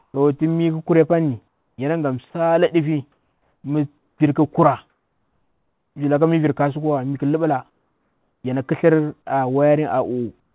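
Comfort noise in place of the background at 0.0–0.14 s and 1.48–1.78 s: in the pauses the real room sound gives way to a steady, featureless hiss, about 3 dB and 6 dB quieter, likely because the sender stopped transmitting and the receiver synthesised filler noise. The same swap happens at 3.12–3.64 s, between "pani yanaga msaledifi" and "mi vir" (about 2 dB quieter), and at 3.98–4.2 s, after "pani yanaga msaledifi mi" (about 8 dB quieter).

Onset clipped by the voice detector at 4.18 s: as sound resumes, its first 20 ms is missing and it starts abruptly, likely because the detector reacted late and that opening was never sent.

Comfort noise in place of the background returns at 4.9–5.96 s, just before "villaka mi virkasu", and at 7.7–8.44 s, each about 4 dB quieter, and again at 10.4–10.55 s, about 3 dB quieter. Throughout, nothing is heard above 4 kHz, which fits a narrowband telephone codec on the call path.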